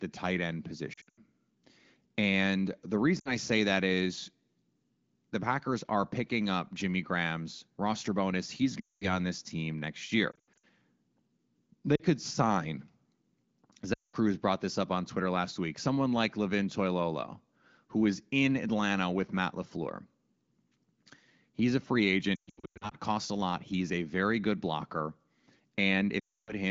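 Lost AMR speech frames break up this wideband call at 0.93, 3.19, 8.8, 10.31, 11.96, 13.93, 22.36 and 26.2 s. Each time the decoder stretches the last good sound and fades it toward silence. The worst patch, 22.36 to 22.94 s, loses 400 ms in scattered bursts.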